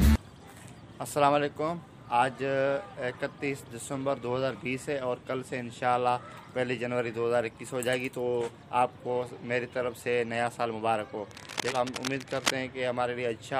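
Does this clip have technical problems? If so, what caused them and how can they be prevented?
Yes. From 11.28 to 12.52 s there is cable scratch noise: dense, uneven bursts of scratching and rustling that sit only a few decibels below the sound itself. The likely cause is a worn cable, connector or control being moved, so its contact resistance jumps about rapidly. On a spectrogram this shows as irregular broadband smears across that stretch. The waveform shows ragged, spiky bursts over the signal. Replacing or cleaning worn cables and connectors, and keeping them still while recording, prevents it.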